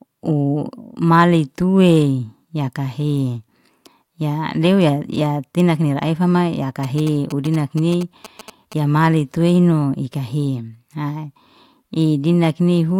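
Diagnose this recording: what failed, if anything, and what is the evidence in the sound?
GSM signalling bursts in the analogue wiring: from 6.83 to 8.74 s, before "ya male tuino ikah", rectified radio bursts from a nearby phone give galloping 217 Hz buzzes, seen as stacked comb lines on a spectrogram.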